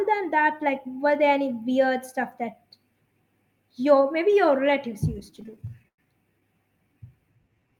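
From 5.19 to 6.00 s the speech hits repeated stalls (stutter): packets arrive late, the buffer keeps emptying, and the receiver stretches the last sound over thirteen short gaps. The longest gap is about 102 ms. Then from 7.36 s to the end, a jitter buffer slow-down repeats pitch periods to rebuild reserve, so speech drags at 86% speed without changing pitch.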